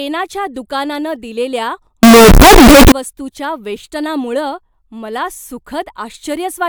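From 2.03 to 2.92 s, right after "दुकानानं दिलेल्या", the speech turns into a float read as integer fault: a blast of harsh, very loud sound with background noise as loud as the speech. The likely cause is 32-bit float samples interpreted as 32-bit integers. The waveform appears as a near-square block at an almost fixed, high level, and the spectrogram fills with broadband energy.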